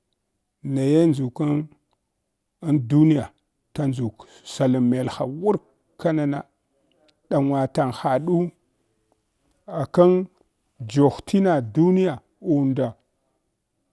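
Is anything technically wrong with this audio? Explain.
No, nothing technically wrong can be heard in this speech recording. There is no audible fault anywhere in it.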